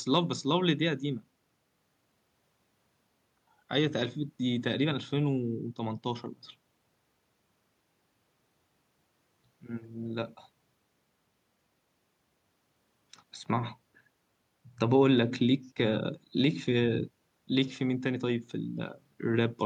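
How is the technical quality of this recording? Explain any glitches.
Nothing in this speech recording stood out as a technical problem on listening, so there are no glitches to explain.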